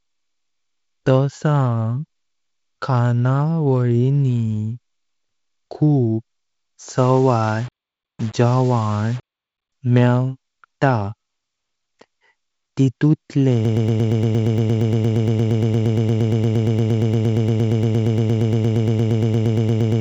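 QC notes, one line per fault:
6.98–9.72 s, low bit depth without dither: the speech turns grainy and gritty, with a rough distortion that tracks the voice and rises and falls with it. This is likely a requantisation to about 6 bits by plain rounding, leaving an error floor of very roughly 25 dB below the signal. On a waveform the quiet stretches show visible stair-steps and flat runs; on a spectrogram a broadband haze follows each syllable instead of sitting as a steady noise bed.
13.65 s to the end, broken-record loop: a 116 ms fragment repeats back to back, over fifty times, until the clip stops, giving a fast mechanical stutter at roughly 8.6 repeats per second. The cause is likely a playback or stream stall that kept resending its last buffered piece, so the speech that should have followed is lost. A waveform shows one identical shape tiling end to end; a spectrogram shows a frozen pattern of vertical stripes.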